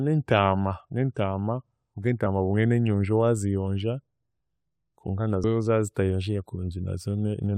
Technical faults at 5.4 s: compressed frames skipped

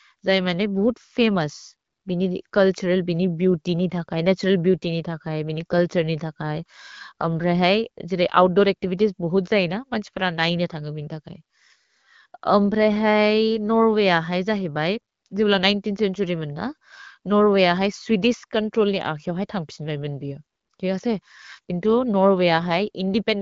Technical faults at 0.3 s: none

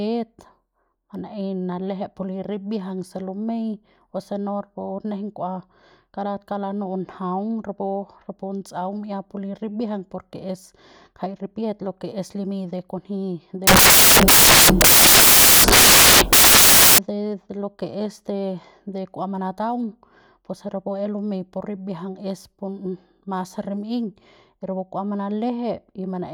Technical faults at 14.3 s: samples built from the wrong bytes

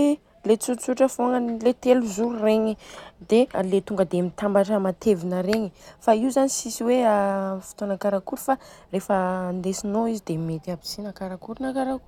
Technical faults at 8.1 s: none

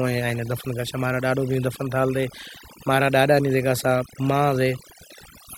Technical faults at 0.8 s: overdone noise removal

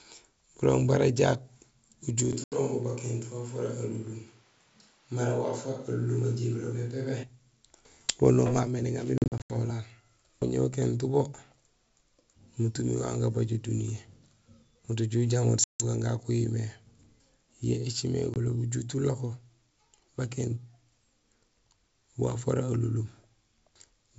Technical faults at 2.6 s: switch to a distant microphone; packet loss on an ADPCM call

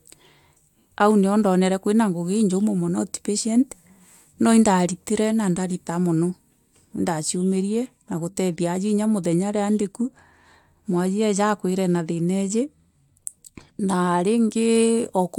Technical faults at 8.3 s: none

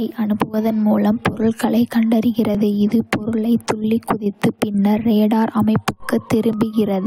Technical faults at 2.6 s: overlap between stream segments

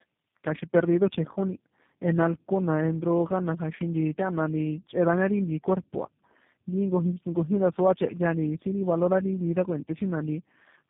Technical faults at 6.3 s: tandem speech coding

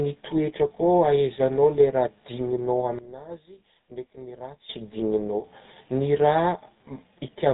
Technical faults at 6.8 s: GSM full-rate codec

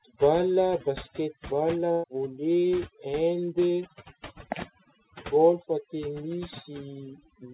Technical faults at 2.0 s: overdone noise removal; burst of packet loss

